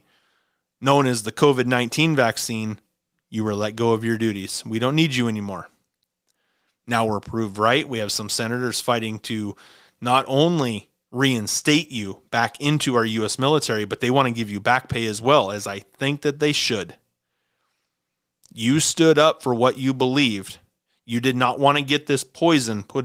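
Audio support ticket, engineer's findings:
Nothing to flag here: listened through the whole speech clip and heard no faults, so no component needs chasing.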